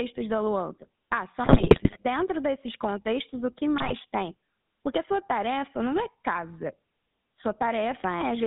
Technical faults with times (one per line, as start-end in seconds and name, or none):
0.00-8.46 GSM full-rate codec
1.44-1.97 GSM bit errors
3.78-3.94 GSM bit errors